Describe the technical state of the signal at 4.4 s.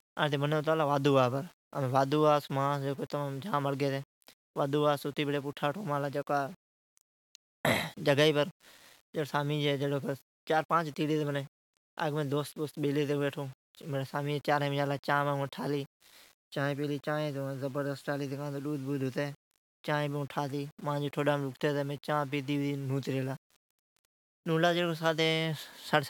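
At 4.4 s the speech carries a grainy, signal-following distortion present throughout the clip, with quiet passages turning gritty and near-silence dropping out or sputtering. The likely cause is low bit depth without dither, rounding to 8 bits, putting the error roughly 30 dB below the signal.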